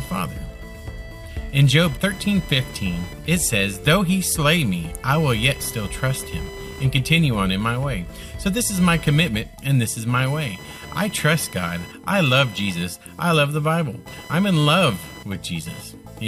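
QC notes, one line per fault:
throughout: computer activity noise, buzz pulsing around 1 kHz, about 20 dB down, as computer load shifts the shared ground; spectrogram shows horizontal lines spaced about 1 kHz apart.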